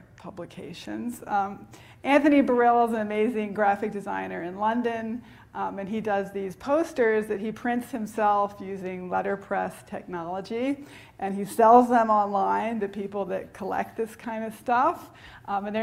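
No technical faults can be heard anywhere here.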